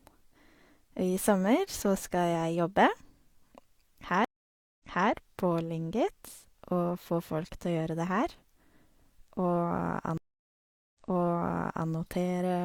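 A stream reconnect occurs at 4.25 s and again at 10.18 s. The dropped connection leaves a blank, flat-line gap of 0.55 s and then 0.77 s. A fresh decoder then resumes 0.3 s and 0.94 s earlier, so stretches of the sound repeat.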